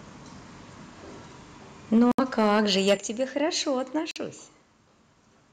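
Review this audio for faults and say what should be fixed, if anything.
From 1.93 to 2.94 s the loudest syllables turn harsh and crackly, with peaks pushed about 6 dB past the ceiling and a few percent of samples flattened. That's likely microphone overload: input gain set too hot, so the converter chops off the waveform tops. Back the mic's input gain off until loud peaks sit well below full scale.

Three sudden level drops hit the voice and background together: about 3 dB at 1.98 s, about 8 dB at 2.97 s, and about 2 dB at 3.99 s. Each is a single step, and the first two land during or right after the distorted stretch. That pattern fits the microphone volume being stepped down by the call software reacting to clipping. Set the gain correctly up front, or turn off automatic mic adjustment so it doesn't keep ducking the input.

There are two short holes of silence, from 2.12 to 2.20 s (about 70 ms lost) and from 4.11 to 4.18 s (about 46 ms). 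Afterwards the sound picks up as if it had kept playing through the gap. These are most likely Bluetooth dropouts, where packets reached the headphones too late and got discarded. The lengths point to roughly three and two lost frames. Keep the headset close with a clear line to the source, or use a wired connection for critical listening.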